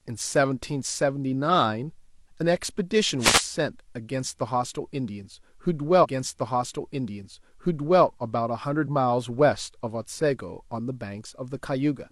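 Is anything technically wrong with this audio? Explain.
Yes, this speech recording has two distinct problems.

From 3.19 to 3.43 s there is a wireless microphone noise hit: a quarter-second swish of static rushes over the voice and then clears. The radio link from an analogue FM transmitter momentarily faded as reflected paths cancelled the direct signal, so receiver hiss surged up. Unlike a digital dropout, it brings noise rather than silence, and the sound beneath it keeps running without a gap or a jump.

From 5.99 to 7.99 s a stream segment is repeated: about 2.0 s of the programme plays a second time, with a small blip where playback jumps back. The player fetched or queued the same chunk twice, so the timeline gains roughly two seconds. What separates it from an echo or a stutter is that the whole passage recurs intact, at full level and length, rather than fading tails or rapid short loops.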